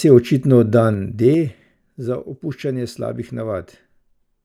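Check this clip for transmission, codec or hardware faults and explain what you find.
There is one fault in the speech. Zipper noise runs from 0.74 to 1.95 s: the level drops by about 10 dB in unsmoothed 3 dB jumps, around three a second, and each jump puts a small click on the signal, heard as a ticking zip.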